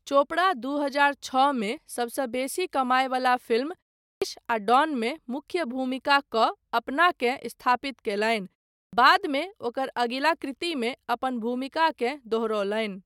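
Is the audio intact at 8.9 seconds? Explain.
No. A clipped start after a pause runs from 8.79 to 8.93 s: after a 0.32 s silence the output is still waking, so about 139 ms of the onset is swallowed and the sound begins abruptly. Muted pauses, by contrast, lose nothing.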